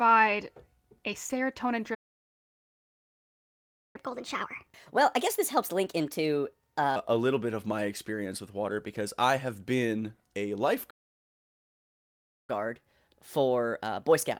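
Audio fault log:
1.94–3.96 s, playback stall: The speech cuts to silence for 2.0 s. It then resumes. The player likely ran out of buffered data or had its thread blocked.
3.96–6.96 s, catch-up at higher speed: The speech plays at 1.25 times normal speed. Pitch rises about four semitones. The player is draining its backlog by resampling. Speed and pitch then return to normal.
10.90–12.50 s, playback stall: Silence again, this time for 1.58 s. The speech then picks up. The likely cause is the same starved or blocked player.
12.50–14.40 s, catch-up at higher speed: Playback runs at 1.15 times speed. Pitch rises about two semitones. The clip ends before it slows back down.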